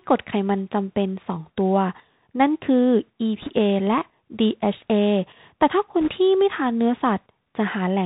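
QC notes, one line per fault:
throughout: Bluetooth CVSD headset codec. Narrowband 64 kbps delta coding cuts everything above 4 kHz, leaving granular hiss, scratchy sibilants and audible distortion where loud high sounds outrun the step size.
3.42–3.51 s and 6.01–6.11 s: bit errors on a Bluetooth voice link. Roughly 3% of bits flipped, adding brief rushing crackle without loud clicks, since each bit carries little weight.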